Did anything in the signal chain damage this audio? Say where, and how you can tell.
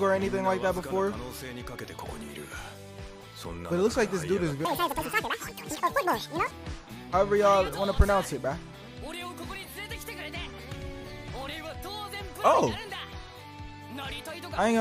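Yes. From 4.65 s to 6.51 s there is a section at the wrong speed, running at 2.0 times its proper rate. This most likely happened at the editing or playback stage, where that stretch was clocked against the wrong rate and the samples were read out too fast. Because speed and pitch are tied together, the sound there is hurried and jumps up by roughly ten semitones, then drops back to normal at 6.51 s.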